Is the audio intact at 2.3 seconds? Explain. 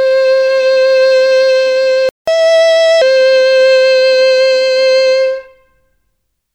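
No. At 2.3 s the music is in a catch-up at higher speed, running from 2.28 to 3.02 s: the player resamples its backlog at 1.25 times normal speed, raising pitch roughly four semitones. Just before, a playback stall from 2.09 to 2.28 s silences the music for 185 ms, likely because the player ran out of buffered data.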